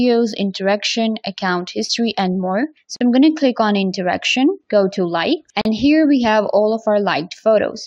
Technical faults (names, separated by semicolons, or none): gap at a join of encoded pieces